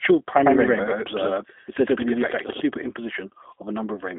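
Right through the clip the speech sits inside a G.729 codec at 8 kbit/s, rebuilt from filter and pulses, so it sounds rough and synthetic, squeezed to roughly 250 Hz to 3.6 kHz with nothing above 4 kHz.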